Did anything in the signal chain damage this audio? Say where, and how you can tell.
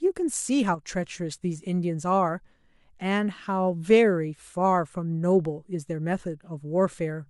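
Yes, one channel drops out from 0.75 to 0.89 s, with the level dipping about 6 dB in the mono sum. That's likely a flaky analogue cable or connector losing one side briefly.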